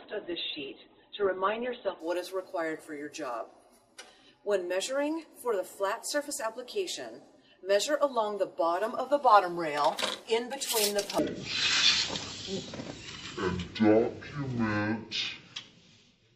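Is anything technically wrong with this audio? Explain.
Yes, two faults. From 0 to 2.0 s, an adaptive stream starting at a low bitrate: the treble is missing or synthetic and artefacts are stronger, consistent with a 12 kbit/s Opus tier, until it switches abruptly and without a gap to a fuller version. From 11.19 s to the end, a section at the wrong speed: playback runs at 0.504 times normal, dropping pitch by about ten semitones and slowing everything together, likely from a clock mismatch in editing or playback.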